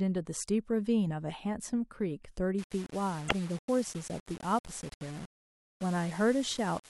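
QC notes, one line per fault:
2.58 s to the end, low bit depth without dither: the sound turns grainy, with distortion that moves with the signal and an error only about 20 dB below it, likely from rounding to around 5 bits with no dither. Unlike steady hiss, the grit rises, falls and sputters out with the sound itself.
3.25 to 3.32 s, damaged data in a compressed stream: a 70 ms glitch breaks through the grainy passage, where the decoder misreads corrupted frames and resyncs on the next header.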